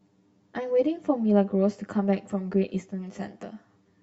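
Speech with channel delay (comb filtering) throughout: one channel trails the other by around 10 ms, and the mono sum cancels at evenly spaced frequencies, starting near 50 Hz and repeating about every 100 Hz, leaving a fixed, hollow, phasey coloration.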